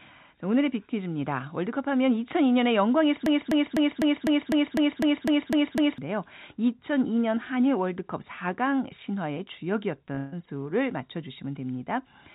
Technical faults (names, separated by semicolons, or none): broken-record loop; repeated packet loss (robotic sound)